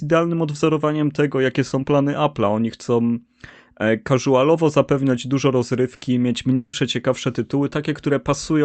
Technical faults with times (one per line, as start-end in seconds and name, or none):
5.95-6.04 burst of packet loss
6.55-6.76 long network dropout